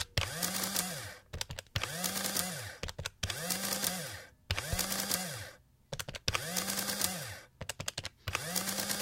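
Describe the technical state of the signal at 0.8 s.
At 0.8 s the audio shows a block size mismatch (truncated), present throughout the clip. One stage writes blocks, consistent with 1024 samples, that the next stage reads only partly, discarding each block's tail. This produces a buzz at 46.9 Hz, while the overall speed stays at 1.0. On a waveform, small breaks appear roughly every 21 ms. A spectrogram shows evenly spaced vertical striping at that rate.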